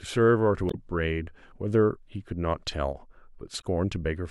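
A speech clip with damaged data in a compressed stream, heard as short garbled blips from 0.67 to 0.75 s and from 3.60 to 3.64 s. Corrupted bytes made the decoder misread those frames and lose sync until it found the next valid frame header.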